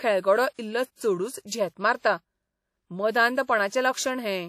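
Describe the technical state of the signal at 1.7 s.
At 1.7 s the speech carries the same damage present across the whole clip: a ringing, washy texture with hiss that rises and falls with the signal, and nothing above 15.5 kHz. This is likely WMA compression, with long transform blocks smearing quantisation noise and zeroing weak components, which fits a bitrate around 48 kbps.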